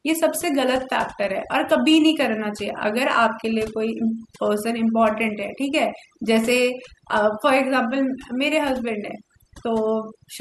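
From start to finish, overdone noise removal shapes the speech: a noise reduction stage set far too aggressively drops individual frequency bands whenever they sit close to its noise estimate, taking the quieter parts of the voice with them. Gaps fall to near silence sprinkled with twinkling specks.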